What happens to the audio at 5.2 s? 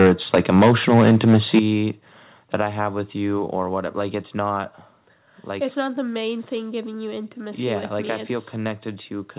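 Nothing goes wrong at 5.2 s: the speech continues intact through that moment, carried over the call path with its telephone-band sound and nothing above about 4 kHz.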